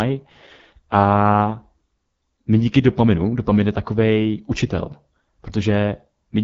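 AMR wideband (HD Voice) codec damage runs through the entire clip: the speech is rough and raspy, which points to one of the codec's lowest rates, near 8.85 kbit/s. A pulse-excited vocal-tract model is starved of bits, and nothing is present above 7.6 kHz.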